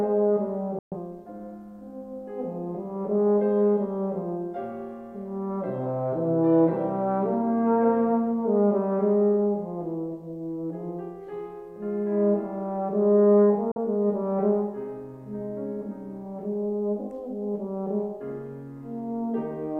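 Digital broadcast dropouts at 0.79 to 0.96 s and 13.71 to 13.77 s: the receiver lost valid frames and muted, with a 3 ms fade to silence. The hole lengths fit roughly three lost frames and then a single lost frame.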